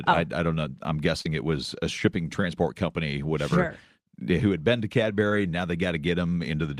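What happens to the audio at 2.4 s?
Short concealed packet loss at 2.42 s, after "it was a shipping": 10 ms arrived too late, so the receiver extended the preceding sound, leaving a brief smear.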